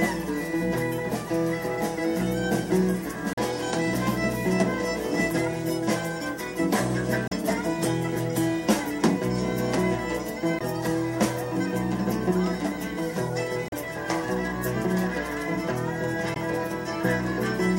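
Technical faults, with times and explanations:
3.33–3.39 s, 7.26–7.33 s, 10.58–10.62 s, 13.68–13.74 s and 16.33–16.37 s: damaged data in a compressed stream. Each 40–65 ms burst is where the decoder misreads corrupted frames and hunts for the next header, heard as a chirp, squawk, click or short hole.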